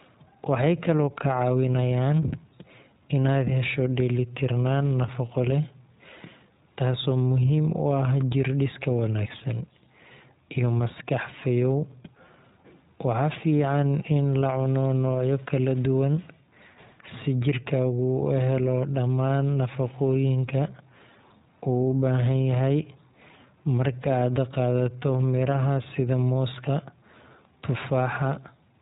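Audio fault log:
throughout iLBC codec: each short frame is coded independently and everything above 3.8 kHz is cut, so the speech sounds muffled, plainly rough and slightly synthetic.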